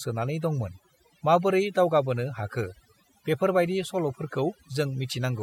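Throughout the speech, overdone noise removal gates frequency bands near the noise floor, leaving near-silent gaps with twinkling specks, and a spectrogram full of isolated speckles.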